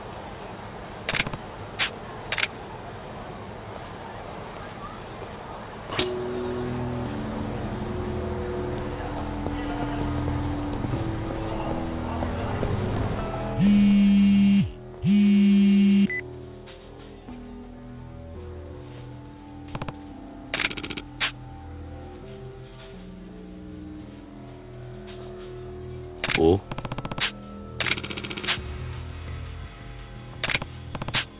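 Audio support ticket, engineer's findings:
Aliasing, whole clip: resampler dropped the rate with no anti-alias filter, which fits a conversion down to 8 kHz. Content above 4 kHz folds back below the edge, gritty and metallic, roughly 15 dB under the signal, with energy pressed hard against 4 kHz.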